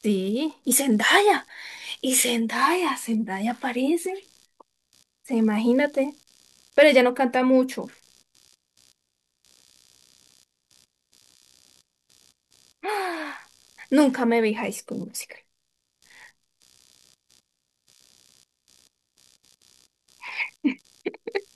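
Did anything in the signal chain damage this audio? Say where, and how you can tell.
Yes. The damage is in the analogue wiring: the audio circuit shares a ground with the computer, and load changes in the processor, graphics card or mouse shift that ground, producing computer activity noise. It runs through the whole speech recording as a faint buzzy, chirping pulsing at around 70 per second, roughly 40 dB below the speech. It rises and falls with the machine's workload rather than with the talking, which points to the ground path and not the microphone or the source.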